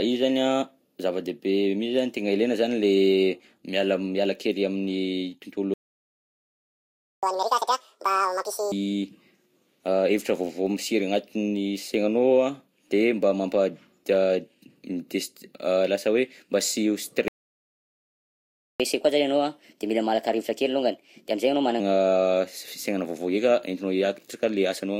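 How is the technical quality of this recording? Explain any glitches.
The recording has two interruptions, each followed by a stretch of sped-up playback, so its timing and pitch are disturbed at two points.

Playback stall at 5.74 to 7.23 s and again at 17.28 to 18.80 s, each about 1.5 s long. The speech cuts off mid-flow and the output goes silent, likely because the player ran short of data or its thread was blocked. On a waveform each stall is a flat gap. On a spectrogram it is a blank vertical band.

Catch-up at higher speed follows each stall, as the player resamples its backlog to regain lost time. From 7.23 to 8.72 s the speech runs at double speed with pitch raised about ten semitones, sounding chipmunk-like. From 18.80 to 21.80 s it runs at 1.15 times speed, about two semitones higher. Normal speed resumes at each end point. A spectrogram shows the harmonics shifted upward and syllables compressed in time.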